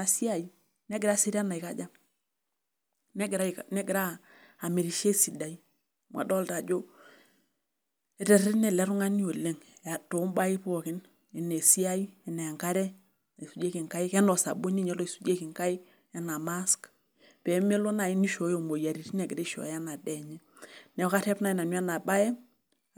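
Listening to the speech here, nothing stood out as a technical fault at any point.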